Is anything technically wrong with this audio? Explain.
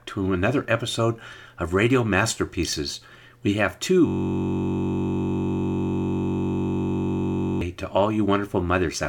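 Yes. From 4.07 s to 7.61 s the audio gives way to a steady, mechanical buzz pitched at about 46.9 Hz. A single 21.33 ms fragment repeats identically over 160 times. This is a system hang loop: the computer or driver stalled, and the sound hardware kept replaying the same ring buffer. A loop that short fits a 1024-sample buffer and fuses into a continuous tone at the loop rate rather than a stutter.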